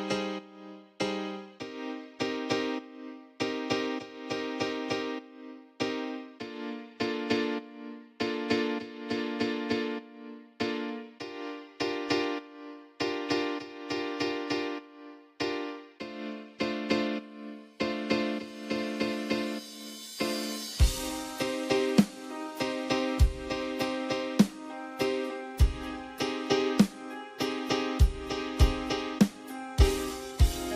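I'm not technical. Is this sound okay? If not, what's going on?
No. Sample clock jitter runs throughout. The recorder's timing wobbles slightly, adding a faint hiss or roughness that grows on loud, bright sounds and disappears in quiet.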